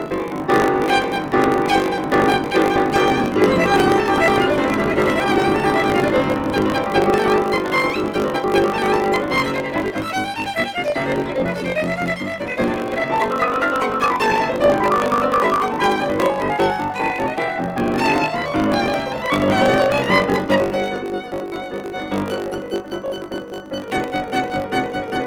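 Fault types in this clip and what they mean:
Block size mismatch (truncated): each block's end is discarded, giving a 50 Hz buzz and music running 1.07 times fast at normal pitch, unlike a sample-rate error.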